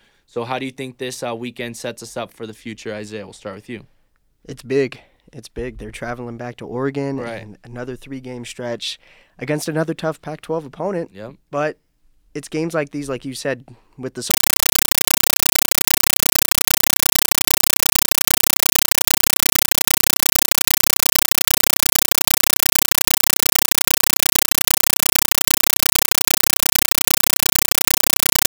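A speech recording that, from 14.31 s to the end at 28.50 s, turns into very loud, chattering static, 8 ms noise bursts repeating 31.25 times a second. This is a compressed stream played as audio: an undecoded AC-3 bitstream treated as ordinary samples.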